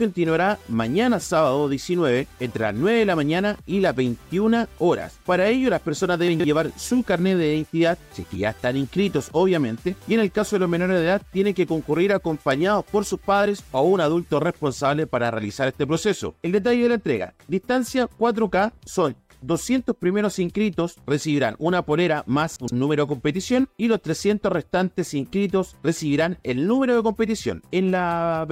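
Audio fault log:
6.28–6.44 s, chunks out of order: a brief jumbled stretch. One 40 ms chunk arrives three chunks late and plays after material that should follow it. Nothing is missing, but the sequence is scrambled over about 160 ms, with three hard joins.
22.56–22.72 s, chunks out of order: the same garbled moment, again with a 40 ms chunk displaced by three positions.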